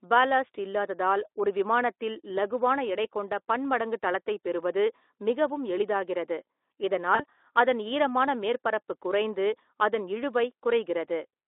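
At 7.15 s the speech breaks up, with VoIP packet loss concealed by the speech codec. About 40 ms of audio never arrived, which fits two lost 20 ms frames. The decoder filled the gap by repeating its last pitch and vocal filter at falling gain. That turns the sound into a short buzzy tone or coloured noise that fades. The gap runs to about 7.22 s, and the voice stays weak or distorted a little beyond it, because recovery builds on the guessed frames. The Speex coding, on a narrow 300 to 3600 Hz line, adds only light coding damage around it.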